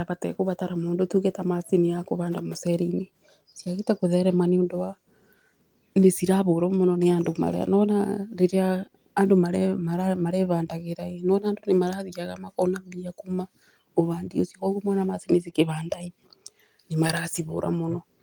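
A speech clip with clock drift between sender and receiver running through it: the sender's clock is about 1% slow, so the receiver keeps padding the audio to avoid running short. Unlike a fixed sample-rate mismatch, which shifts pitch evenly, this shows up as uneven hiccups that all stretch time. Repeated timing corrections occur from 0.12 to 2.49 s, where the sound plays at about 98% speed and gains roughly 50 ms. They recur from 4.96 to 14.65 s, just after "gũtherema nĩ ũndũ wa," at about 99% speed, adding roughly a tenth of a second. Packet-loss dropouts break up the audio at random, whereas these small repeated pieces consistently slow the tempo.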